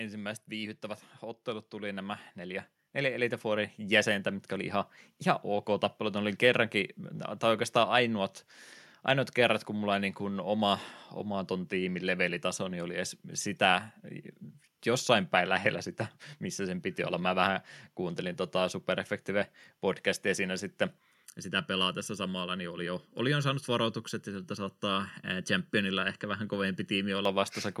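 From 0.48 s to 5.96 s the speech and the room noise behind it swell together, climbing by about 12 dB over those five and a half seconds rather than jumping. This is automatic gain rising. The gain control judged the incoming level too low and kept turning itself up. Because it acts on the whole signal, the background lifts in step with the voice instead of staying put beneath it.

Right after "podcastia siinä sitten", from 21.25 s to 27.25 s, the voice turns hollow and phasey, as if heard through a tube, with a dull, scooped quality that stays fixed as the speech moves. That is channel delay causing comb filtering. One channel lags the other by under a millisecond, and when the two are folded to mono, frequencies they share cancel in evenly spaced notches starting somewhere near 700 Hz.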